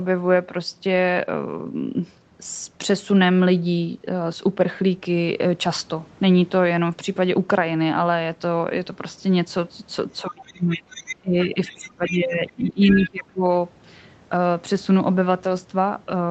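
From about 10.22 to 13.44 s the talker's speech sinks, by roughly 25 dB at its deepest and for about three seconds in total. That's speech suppressed in double talk, likely from the echo canceller ducking everything while both ends were talking at once. Inside that stretch the other side's voice is leaking through in scraps at 10.44–10.52, 10.72–10.79, 10.97–11.16, 11.41–11.46, 11.66–12.17 and 12.87–13.08 s. They range from about 35 dB to only about 10 dB under the speech, which is likely loudspeaker echo the canceller didn't fully remove. The top end stopping around 8 kHz fits a wideband Opus call path.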